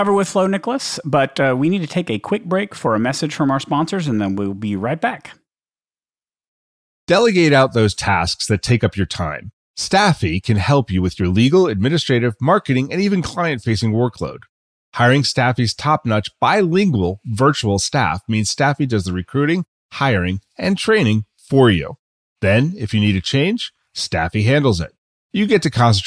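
No technical faults can be heard anywhere in the speech recording.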